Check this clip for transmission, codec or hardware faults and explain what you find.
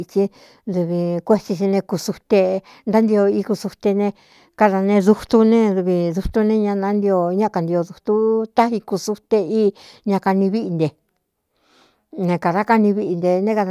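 Nothing in the speech signal points to a transmission, codec or hardware fault; level, continuity and timing hold steady throughout.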